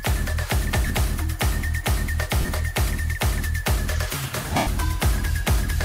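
Lost LE Audio frames hit at 0.87 s (30 ms), 2.41 s (70 ms scattered, longest gap around 40 ms) and 4.57 s (100 ms). The decoder recycles the last spectrum with scrambled phase, so sound smears into noise, and the longest gap fades toward silence.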